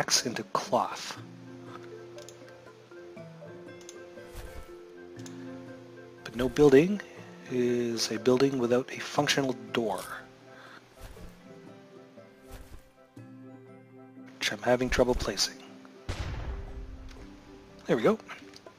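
Nothing in the recording registers as a technical fault.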